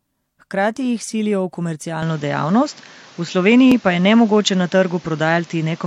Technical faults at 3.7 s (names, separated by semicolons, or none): input switched to a poorer device; dropped buffer (overrun)